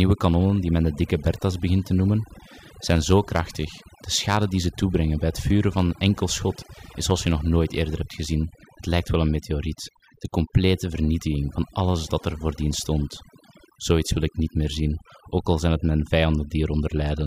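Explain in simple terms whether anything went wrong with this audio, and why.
Overdone noise removal throughout: the cleanup was set too hard, muting quiet frequency bands, leaving near-silent gaps with twinkling specks.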